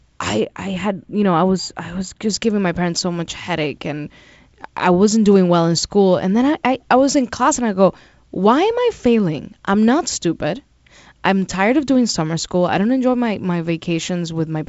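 From 0.40 to 2.30 s, channel delay (comb filtering) hollows the speech. A lag of about a tenth of a millisecond notches around 5 kHz, unlike the constant G.722 top-end limit.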